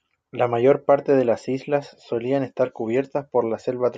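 No technical faults can be heard in this speech clip.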